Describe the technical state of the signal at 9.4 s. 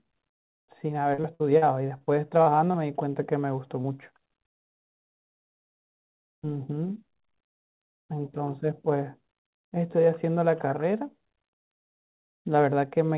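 At 9.4 s the speech is intact, with no dropout, glitch or distortion, only the narrow telephone-style band of the call codec, which carries nothing above 4 kHz.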